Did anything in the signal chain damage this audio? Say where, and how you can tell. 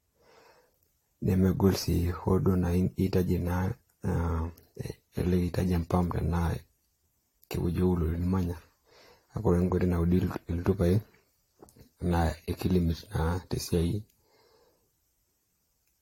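Yes, at the codec stage: this is likely generation loss from about five AAC-LC encodes at 64 kbit/s. Throughout, nothing sits above 16.6 kHz, and each requantisation on a shifted frame grid adds swirly, hollow smearing and blunts speech attacks.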